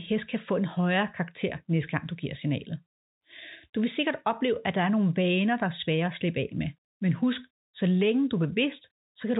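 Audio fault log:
No faults are present in this speech clip. The G.711 telephone coding path can be heard in the bandwidth, which stops at 4 kHz, and any quantisation noise it adds is faint at most.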